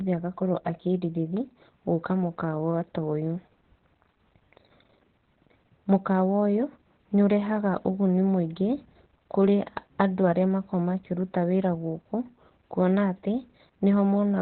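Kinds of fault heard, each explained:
Opus voice compression: The whole clip passes through the SILK speech coder at a very low rate, and the damage is heavy. The band is cut to narrowband, with nothing above about 4.4 kHz. Speech sounds muffled and boxy. The excitation is coded coarsely, so the voice turns hoarse and a little robotic. Sibilants lose their edge. This level of loss fits a bitrate around 8 kbps.
channel delay (comb filtering): For the first 1.37 seconds, one channel runs a few milliseconds behind the other, and the two are summed to mono. The shared speech cancels at evenly spaced frequencies. The lowest notch sits near 100 Hz, and more follow at regular steps above it. The voice sounds hollow and phasey, as if heard through a tube. The effect stops after this opening stretch.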